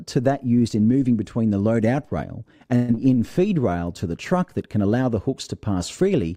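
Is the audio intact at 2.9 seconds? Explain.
No. From 2.75 to 2.98 s there is a long network dropout. The last sound is stretched into a fading buzz or hiss for about 0.21 s. Audio then resumes with roughly 0.1 s missing, likely because packets stopped arriving and playback shifted later.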